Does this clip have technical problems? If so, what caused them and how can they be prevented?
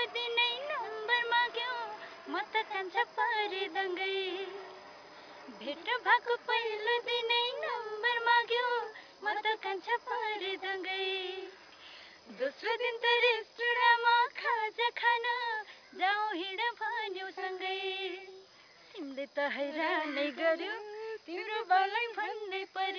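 No, this clip has no technical problems, so there is nothing to trace to a cause or to prevent.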